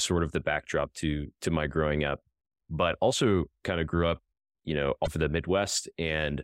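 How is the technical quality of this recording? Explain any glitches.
The recording has one glitch, a short burst of damaged data in a compressed stream, from 5.03 to 5.08 s, right after "grew up you know". For about 40 ms, part of the encoded speech is corrupt. The decoder can't read those frames correctly, loses its frame sync and has to search forward for the next valid frame header before output resumes. What comes out in that gap is a brief artificial chirp, squawk, click or short hole in the speech.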